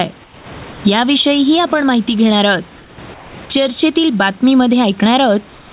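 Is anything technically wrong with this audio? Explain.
Yes, there are two problems. Gain pumping runs through the whole clip, with a swing of around 20 dB. This is likely from input gain set too high and a fast limiter pulling it back. Comfort noise replaces the background at 0.24–0.46 s, 0.72–0.80 s, 2.78–2.98 s, 3.14–3.34 s and from 5.56 s to the end. There the real room sound turns into flat, featureless hiss, about 2 to 6 dB quieter. The likely cause is discontinuous transmission, with the receiver filling the silences with synthetic noise. Throughout, the telephone-band codec leaves nothing above 4 kHz.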